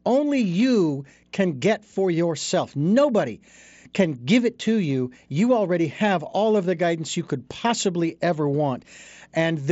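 No technical faults can be heard anywhere in the speech. It has the character of a Bluetooth mSBC headset link, with the sound reaching up to about 8 kHz and a light grain on the louder moments, as that wideband headset path normally gives.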